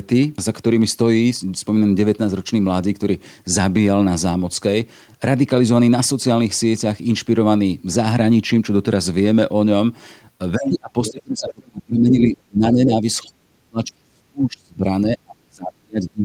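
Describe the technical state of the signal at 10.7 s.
At 10.7 s the speech sits inside a stretch of speech suppressed in double talk, running from 10.57 s to 13.05 s. Across about two seconds of that span the talker's level dips, at its deepest by roughly 30 dB. The likely cause is an echo canceller that could not tell this talker apart from loudspeaker playback and turned both down. On a waveform the envelope caves in, and on a spectrogram the harmonics fade or break into gaps.

That same instant is the end of a brief leak of the other side's voice, from 10.65 s to 10.7 s. The intruding voice sits only about 5 dB below the talker. This is most likely loudspeaker sound that the echo canceller failed to remove from the microphone. It shows as a second, unrelated harmonic pattern overlapping the talker's on the spectrogram for about 50 ms.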